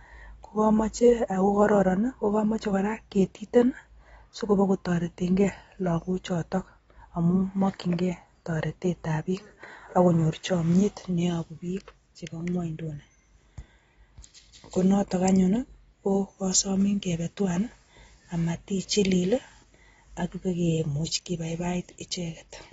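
A speech recording with plainly audible damage throughout, likely from AAC compression: nothing survives above 7.7 kHz, leaving it dull and smeared, which fits a low bitrate around 24 kbps rather than simple low-pass filtering. At 2.61 s a brief hiss of about 12 ms precedes an attack. This is pre-echo, where block-spread quantisation noise arrives before the transient, unlike a click, which lands on it.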